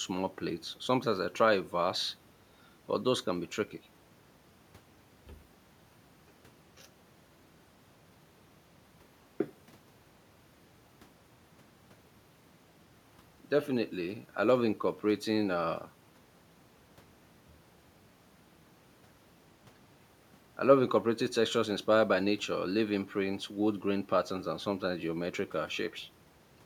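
No technical faults can be heard anywhere in the recording.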